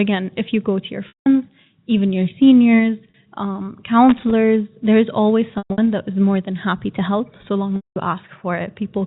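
Packet loss with pitch repetition occurs first at 1.08–1.26 s, between "you go to your" and "even your seniors um". About 180 ms of audio never arrived, and the receiver looped the last pitch period to cover the gap. The speech turns briefly buzzy, fades toward silence, and then cross-fades back in. A shorter 40 ms loss at 3.10–3.14 s only holds the sound for a moment, giving a slightly stretched, buzzy note.

Loose connector crackle follows at 4.09–4.31 s. A faulty contact kept making and breaking the circuit, chopping the signal, heard as an irregular burst of scratchy crackle.

Packet loss returns at 5.58–5.78 s, between "there is always" and "that is more than". Here the losses are scattered over about 200 ms, with the longest run 120 ms, so the repeated-pitch buzz stutters. The last loss, at 7.76–7.96 s just after "so long", removes about 200 ms. These gap lengths fit 20 ms packets. 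The bridging tone dies away to silence before the speech resumes.

Throughout, the telephone-band G.711 coding keeps everything below 4 kHz.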